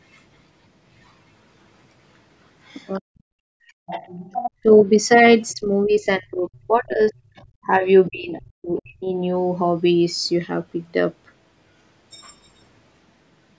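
From 2.65 to 4.51 s, then at 5.49–5.54, 6.55–7.44 and 8.78–8.82 s, the other side's voice is leaking through faintly beneath the talker, likely unremoved loudspeaker echo. Its fainter quality sets it apart from steady crosstalk. Between 2.98 and 9.12 s, speech is suppressed in double talk: the talker dips by up to about 40 dB, roughly three seconds in total, likely from the echo canceller ducking. Unlike network dropouts, these gaps follow the overlapping far-end voice.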